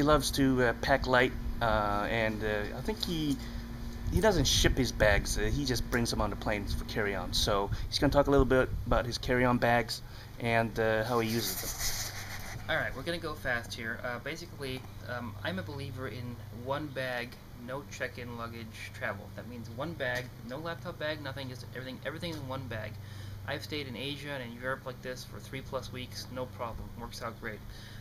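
Nothing stood out as a technical problem on listening to this audio.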